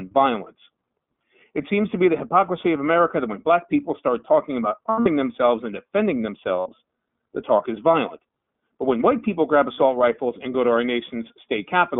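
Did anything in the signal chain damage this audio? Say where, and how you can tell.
Yes, at two stages. At the codec stage, the whole clip passes through the iLBC codec. The band runs only from about 150 Hz to 3.5 kHz, and the sound has a grainy, slightly synthetic roughness, which fits iLBC's 15.2 kbps mode with 20 ms frames. Each frame's excitation is coded on its own. A simple telephone band-limit would sound dull but clean, so the roughness is what points to the codec.

At the network stage, there are lost iLBC frames in three places. The first is from 4.90 to 5.09 s, between "people start talking about" and "themselves and defending". About 140 ms is missing there, scattered over 160 ms, with the longest run around 70 ms. The second is a 60 ms loss from 6.60 to 6.68 s, after "themselves and defending". The third is another 60 ms from 9.72 to 9.80 s, between "when white people grab" and "rifles and go to". 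Each gap sounds like a held, buzzy vowel, not silence or a click, because the decoder repeats the last pitch cycle mixed with noise. The sound recovers at the very next frame, unlike jitter-buffer stretching.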